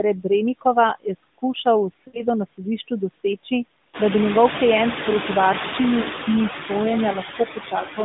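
Noise suppressor artifacts run through the whole clip. The suppressor pulls down, frame by frame, the bands it judges to be steady noise, cutting them by about 12 dB. The noise sinks between words and rises under them. The effect grows after the room noise climbs by about 15 dB around the 4 s mark. On a spectrogram the noise floor looks blotchy and pumps between syllables, with isolated tonal specks left in the gaps.

At 2.08 to 2.24 s come lost AMR speech frames. The decoder repeats the last good pitch and vocal-tract settings at falling gain, which points to a run of about three frames, some 60 ms of sound. The voice stretches into a drawn-out smear and fades, then returns weak. A briefer loss at 6.16 s, roughly one 20 ms frame, gives a brief dip. Both appear as short smeared, decaying bands in the spectrogram and as a dip in the waveform envelope.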